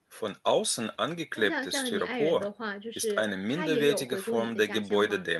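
No audible technical fault turns up anywhere in the speech, and its level, continuity and timing stay steady throughout.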